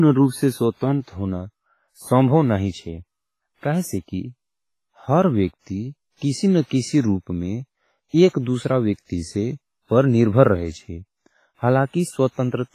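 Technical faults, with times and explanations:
Throughout, WMA compression: the speech rings and sounds washy, with a hiss that swells and fades with the sound and nothing above 15.5 kHz. This is likely a heavily compressed WMA encode; the coarse quantisation, smeared over long transform blocks, fits a low bitrate around 24 kbps.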